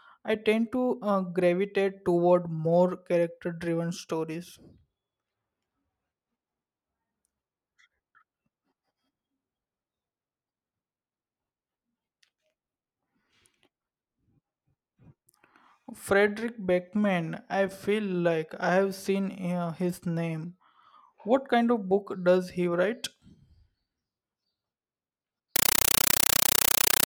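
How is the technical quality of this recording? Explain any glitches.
The recording has one serious glitch near the end. From 25.56 s to the end, the speech is replaced by a compressed stream played as audio. Undecoded Dolby Digital data, most likely an AC-3 stream, is treated as ordinary samples, giving very loud, chattering static. Unlike random digital noise, it pulses strictly: 8 ms noise bursts separated by silent padding, 31.25 times a second.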